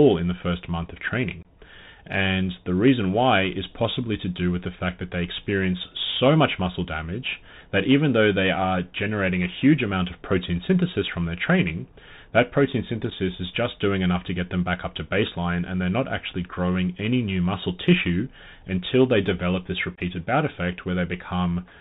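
Throughout the speech the sound is narrow and boxed-in, with no content above 4 kHz, a grainy hiss under everything, and s sounds that turn scratchy where loud high-frequency energy outruns the coder. This is the Bluetooth CVSD headset codec. It sends a single up-or-down bit per sample and adapts its step size, which fits a 64 kbps headset link. The damage is plainly audible.

Three short, hard-edged holes cut into the speech. The first falls from 1.43 to 1.45 s, right after "the first month of", and lasts about 22 ms. A briefer one at 13.10 s, between "their training that protein" and "is just doing enough", runs about 7.5 ms. The third, from 19.95 to 20.00 s, follows "until they develop this" and again lasts about 22 ms. These are unconcealed Bluetooth headset packet loss. Voice packets between headset and phone went missing and nothing was patched in, so the longer gaps suggest roughly three lost packets and the short one a single packet.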